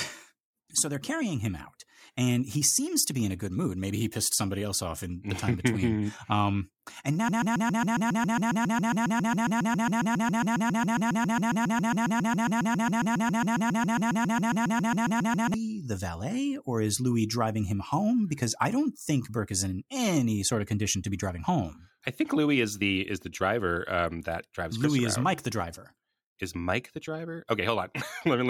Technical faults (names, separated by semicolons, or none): broken-record loop